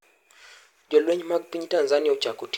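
Nothing goes wrong anywhere in this bit of speech, so there's no fault to point to along the way.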